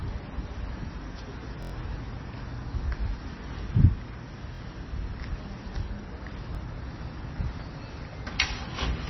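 Throughout the clip, the audio was likely squeezed through MP3 compression at a very low bitrate, around 24 kbps. Short of bits, the encoder removed everything above 5.9 kHz and let weaker frequency lines drop in and out between frames. The result is dull, band-limited sound with a heavy watery, swirling texture, metallic chirps on bright or hissy parts, and smeared attacks.

From 1.63 to 1.72 s, fresh audio failed to reach the output in time, so the device replayed its last buffer as a repeated buffer. The same slice, about 23 ms long, which fits a 1024-sample buffer, sounds several times in a row with hard joins, giving a brief buzzing stutter. The same fault recurs more briefly from 4.55 to 4.60 s, where it is heard as a double repeat, and at 6.55 s as a single click. No audio seems to go missing at these points.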